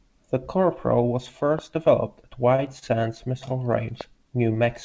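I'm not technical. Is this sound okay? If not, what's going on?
No, there are two kinds of fault.

The first is a loud pop. A sudden electrical jolt, likely from a plug, switch, static discharge or a glitch in the playback hardware, got added on top of the recording. You hear it as a single sharp pop, clearly louder than the speech, at 1.59 to 1.61 seconds, just before "developed at", and again at 4.01 to 4.03 seconds. The speech carries on underneath each one.

The second is a short stall from a late packet. This audio travelled over an internet call, which sends sound in small chunks, and twice a chunk arrived late. While waiting, the receiving end stretched the last bit of sound to fill the gap, then continued where it left off, so nothing is lost. Just after "developed at", at 2.56 to 2.60 seconds, a sound is held about 22 milliseconds too long, and at 2.79 to 2.84 seconds about 28 milliseconds too long.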